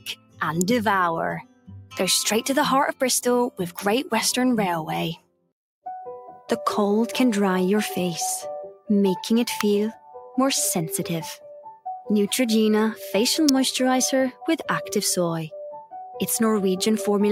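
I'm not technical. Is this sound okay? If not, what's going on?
No. A noise suppressor built for speech has been applied to music or sounds for the whole clip. It treats steady tones and lingering tails as unwanted noise, so the level keeps dipping and recovering, giving a pumping, thinned-out feel.

There are several spots of sound cut by the noise suppressor, at 0.0 to 0.41, 1.42 to 1.96, 5.16 to 5.52, 8.73 to 8.89, 9.92 to 10.37 and 11.37 to 11.86 seconds. In each, the held or fading part sinks, while sudden onsets get through.

Electrical switching spikes are heard as brief sharp snaps at 0.61, 3.79, 9.61 and 13.49 seconds. These are likely caused by a nearby switch, motor or static discharge whose tiny spark was picked up by the audio line.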